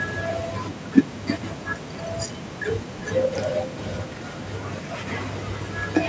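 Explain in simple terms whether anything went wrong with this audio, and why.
From 2.82 seconds to the end, there's a feedback echo between two devices. A second device in the room plays the speech back, the microphone catches it again, and each bit of speech returns roughly every 0.4 seconds, sounding thinner and ringier each time.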